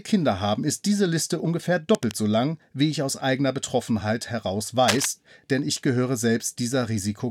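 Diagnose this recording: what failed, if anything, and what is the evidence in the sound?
Cable scratch noise appears at 1.95–2.14 s, about 15 dB below the speech, and again at 4.88–5.06 s, as loud as the speech. Both are dense, uneven scratchy bursts, likely from a worn cable or connector in the analogue wiring whose contact resistance fluctuated as it moved.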